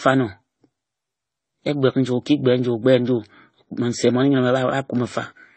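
From start to finish the speech carries the layered grit of transcoding between lossy codecs, likely MP3, then HE-AAC, then AAC-LC, each sounding near 32 kbit/s. Every stage's artefacts pile onto the last, and nothing survives above 8.6 kHz.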